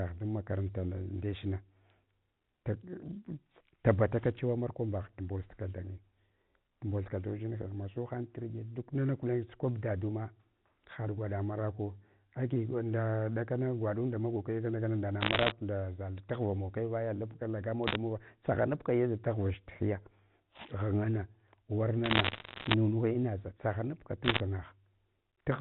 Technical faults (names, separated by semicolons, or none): bit errors on a digital phone line